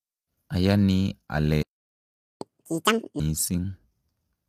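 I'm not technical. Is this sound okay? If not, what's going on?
No. Three things went wrong.

Throughout the clip, the speech was likely squeezed with low-delay AAC compression, a squashing method used for video calls. It works in very short slices of sound so the conversation doesn't lag, but those short slices can't capture the fine structure of a voice well. Here the damage is plainly audible: the speech sounds rough and grainy, with a hiss-like fuzz woven through it instead of a clean, smooth tone.

From 1.63 to 2.41 seconds there is a playback stall, likely because the player ran out of incoming sound or was held up by something else on the device. With nothing to play, it simply went quiet. You hear the speech cut off mid-flow and a gap of about three-quarters of a second before anything comes back.

Right after that gap, from 2.41 to 3.20 seconds, comes a catch-up at higher speed. 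The player was now running behind, so it raced through the sound it had been holding back, at twice the normal speed, to make up the lost time. That also raises the pitch a long way, close to an octave, giving a brief chipmunk-like rush before the speech returns to its normal pace and pitch.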